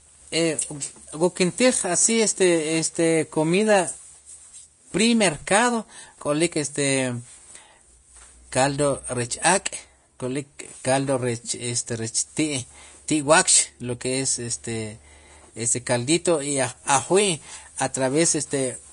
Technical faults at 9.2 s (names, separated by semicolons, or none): Vorbis compression